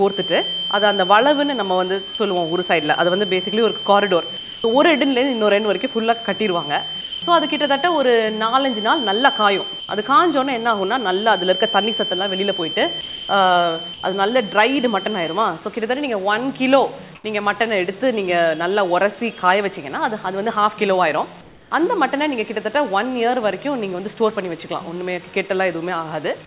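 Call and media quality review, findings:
Feedback whistle, 0.0–15.45 s: thin 3.1 kHz tone, swelling and fading slowly, roughly 10 dB under the signal; likely acoustic loop at the edge of feedback. Spectrogram shows a flat horizontal line under the 4 kHz G.711 ceiling.

Sound dropped by the voice detector at 2.15, 4.37, 7.01, 9.80, 13.01 and 13.94 s, 30–270 ms each: sound gives way to steady noise. Likely sender VAD misfiring. Waveform shows abrupt flat-envelope gaps.

Comfort noise in place of the background at 17.15 s (90 ms, about 2 dB quieter) and 21.41–21.71 s (about 5 dB quieter): background turns featureless. Likely DTX fill. Spectrogram shows smooth, textureless noise patches.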